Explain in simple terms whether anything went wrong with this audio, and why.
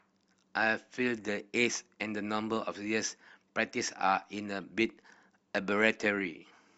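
Something does go wrong in this speech clip, once, at about 4.62 s: a brief glitch caused by damaged data in a compressed stream. A small piece of the compressed file was corrupted, so the player couldn't make sense of it, lost its place, and jumped to the next readable chunk. Unlike a dropout, which is simply a moment of silence, this fault comes from the player losing its place, and it is heard as a chirp, squawk, click or short hole in the speech.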